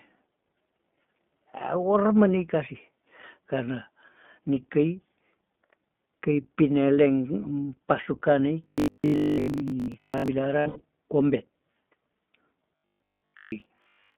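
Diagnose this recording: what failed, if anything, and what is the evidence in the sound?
At the codec stage, the whole speech clip has passed through the iLBC codec. Nothing sits below about 150 Hz or above 3.5 kHz. The voice is plainly rough and synthetic. Its frame-by-frame character fits iLBC's 20 ms mode at 15.2 kbps.

From 8.64 to 10.28 s and again from 12.76 to 14.16 s, the voice collapses into a rigid 50 Hz metallic buzz. That is robotic sound from repeated short buffers. A 50 Hz pitch means 20 ms chunks are being replayed, and most of the real audio in those spans is skipped. The likely cause is a driver or buffer underrun.

Between 10.60 and 10.82 s, lost iLBC frames cause a network-stage fault. About 160 ms of audio is missing across 200 ms. The longest run is well under a tenth of a second. This points to about eight dropped 20 ms frames. The decoder fills each gap with a held, breathy repeat, then recovers almost at once.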